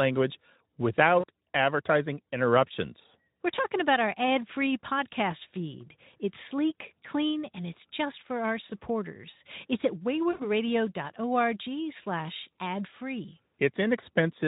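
At 1.20 to 1.24 s, just before "advertising interruptions", at 8.67 to 8.71 s after "it's just for our", and at 10.31 to 10.49 s, the speech smears into a brief buzzy tone or coloured noise that fades: VoIP packet loss concealed by the speech codec. Unlike a plain dropout, there is no silent gap. The decoder stretches its last pitch and filter over the missing audio, which fits two, one and four lost 20 ms frames. The speech then stays weak briefly afterwards through the lightly coded Speex stream.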